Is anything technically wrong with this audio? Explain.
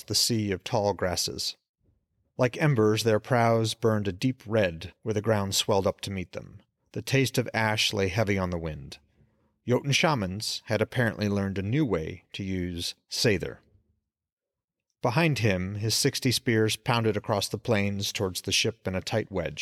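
No, nothing is technically wrong with this audio.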